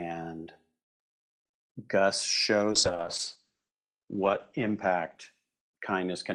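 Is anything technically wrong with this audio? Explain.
Yes. From 2.73 s to the end, there is a call bitrate drop. The bandwidth estimate fell and the encoder went from 32 kbps to 9 kbps, staying lowest for 1.74 s. The speech is coded coarsely and cut off above 8 kHz, so it sounds muffled and rough.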